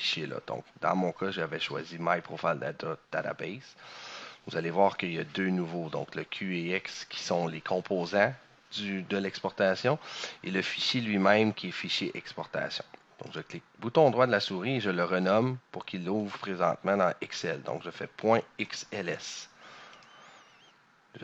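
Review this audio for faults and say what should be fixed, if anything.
Nothing here needs fixing; I listened through and didn't hear any problems worth flagging.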